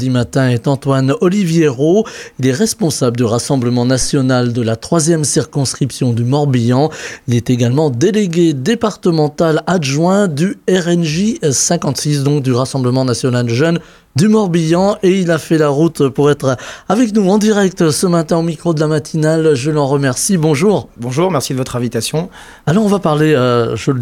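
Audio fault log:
4.01–4.09 s, phantom power thump: a deep, brief thud peaking at about -11 dBFS that dies away in roughly 18 ms. A supply on the live input was switched, and that sudden voltage step passed through the coupling capacitors as a low-frequency pulse.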